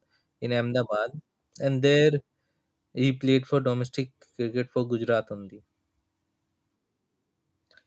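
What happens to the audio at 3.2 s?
Nothing goes wrong at 3.2 s: the speech runs on intact there, with only the 8 kHz upper limit of the call path's band.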